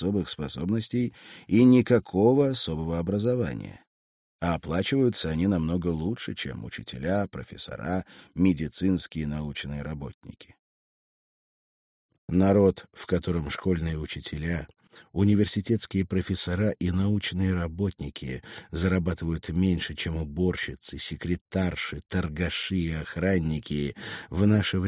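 No technical faults can be heard anywhere in the audio.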